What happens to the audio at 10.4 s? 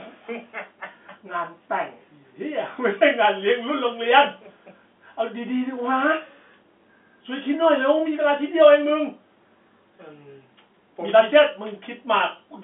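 Nothing goes wrong at 10.4 s: the speech carries on intact through the telephone-band G.711 coding, with no break, click or change in level.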